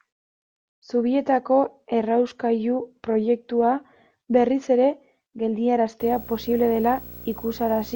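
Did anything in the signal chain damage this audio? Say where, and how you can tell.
Yes, in the analogue wiring. From 6.0 s to the end at 7.95 s, video or display buzz sits under the speech, roughly 20 dB down. It buzzes at 59.94 Hz, the field rate, with hash above it and a thin 15.7 kHz line-rate whine. A screen or video cable is coupling into the audio path.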